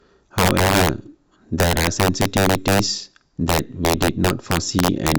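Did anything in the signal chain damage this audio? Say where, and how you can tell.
Yes, integer overflow at a fixed-point gain stage: pushed about 7 dB too hot, the loudest speech peaks (roughly 2 percent) wrap sign, cracking violently throughout.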